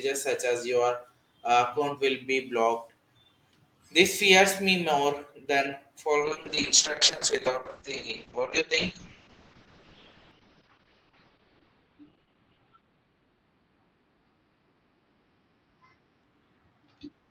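From 6.21 s to the end, the speech turns rough and watery, with the top end muffled above about 6 kHz. This is a call bitrate drop: the encoder fell from 32 to 6 kbps, coarsening its coding and narrowing the bandwidth from about 20 kHz, with the lowest rate lasting about 5.1 s.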